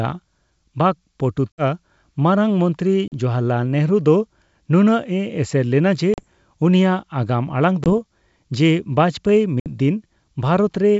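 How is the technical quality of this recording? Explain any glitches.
The speech has five short dropouts. Packet loss on an ADPCM call occurs at 1.52–1.63 s (60 ms lost, just before "ᱢᱟᱨᱟᱝ ᱢᱚᱱᱛᱨᱤ"), 3.08–3.13 s (40 ms, just after "ᱢᱟᱨᱟᱝ ᱢᱚᱱᱛᱨᱤ"), 6.14–6.24 s (40 ms), 7.84–7.89 s (20 ms) and 9.60–9.67 s (60 ms). Each gap fits one to three missing packets. The lost audio becomes a hard-edged silence, and the decoder's adaptive predictor and step size fall out of step with the sender's. When speech returns it is slightly distorted, then settles within some tens of milliseconds.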